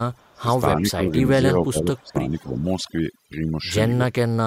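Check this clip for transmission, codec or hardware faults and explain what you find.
Three faults are present in this speech clip.

Overdone noise removal runs through the whole clip. The noise reduction was set far too hard, so frequency bands that sit close to its noise estimate are pulled down or switched off entirely, and the quieter components of the voice are removed along with the noise. The background drops and breaks up into small twinkling specks.

An echo leak appears from 0.19 to 0.37 s. A delayed copy of the voice arrives roughly 290 ms behind the original at a very low level, around 40 dB down, so it is a faint ghost rather than a clear repeat. The likely cause is a far-end echo canceller on a loudspeaker call that failed to remove all of the signal picked up by its microphone, so the residue was sent back.

Speech suppressed in double talk occurs twice. From 0.34 to 0.49 s the voice drops sharply, at worst by something like 20 dB, for about 150 ms. 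From 0.74 to 2.64 s there is a milder but longer dip of around 10 dB, affecting roughly one and a half seconds in total. This is likely an echo canceller that could not tell its own talker from loudspeaker echo while both sides spoke, and attenuated both. The voice audibly sags during these stretches.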